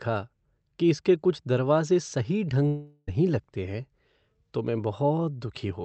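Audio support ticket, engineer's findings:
Buzzy, fading smear replacing sound, 2.67–3.09 s, between "इसके कुछ दरवाजे सही" and "लगते हैं". Likely long network dropout: about 0.4 s of packets lost, concealment stretches the last sound throughout, then audio resumes with that stretch missing.

The call path itself carries Opus coding noise, with the top end stopping near 8 kHz, which fits a wideband setting at around 32 kbps.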